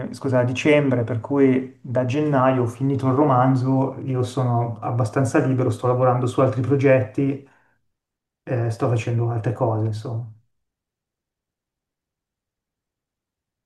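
Nothing goes wrong anywhere in this bit of speech, so there's no technical fault to point to at any moment.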